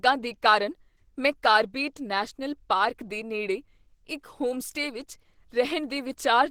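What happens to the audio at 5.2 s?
At 5.2 s the speech carries the same Opus compression damage heard across the whole clip. It is plainly rough, hoarse and grainy, which fits a low-rate hybrid mode near 16 kbps, with likely upper bands coded coarsely and filled with noise. A spectrogram shows content reaching about 20.4 kHz, but with blurred, speckled texture in place of crisp harmonics.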